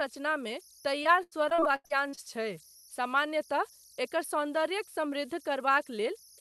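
Speech runs through its full length over converter idle tones, a faint whistle around 5 kHz at about 26 dB below the signal, showing as a thin steady horizontal spectrogram line in pauses and grain beneath quiet speech, likely from an undithered delta-sigma converter cycling through repeating bit patterns at low input levels. From 1.03 to 2.19 s, repeated packet loss (robotic sound) chops the audio: a series of short dropouts, the longest about 84 ms, are each patched by stretching the preceding sound. Roughly 29% of that span is filled this way, which appears as smeared, repeated spectral slices and blocky amplitude steps in the waveform.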